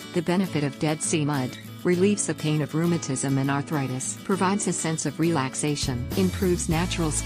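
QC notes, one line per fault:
No technical faults were heard anywhere in the signal, which stays steady and intact with nothing that calls for correction.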